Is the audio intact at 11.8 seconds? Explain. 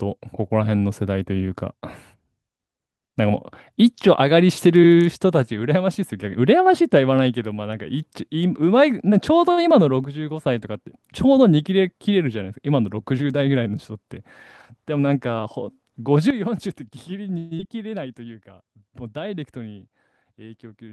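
Yes, at 11.8 seconds the speech runs on cleanly with no dropout, click, distortion or other technical fault at that point.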